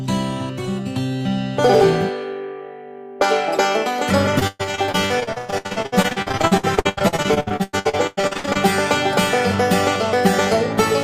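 Repeated packet loss (robotic sound) runs from 4.39 s to 8.57 s. Across that stretch the audio breaks up into dozens of short holes, the longest about 120 ms, as packets arrive late or not at all. Each hole is filled by stretching out the last received sound, so nearly half the span, about 1.9 s in total, is synthetic fill rather than real signal. That rapid cycle of gap and patch produces a choppy texture with pieces missing.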